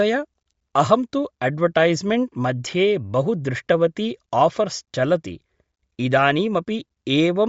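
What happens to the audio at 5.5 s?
At 5.5 s the speech is dull and grainy, with nothing above 7.7 kHz. This runs throughout. Likely cause: Bluetooth LC3 compression, stripping and noise-filling the upper band.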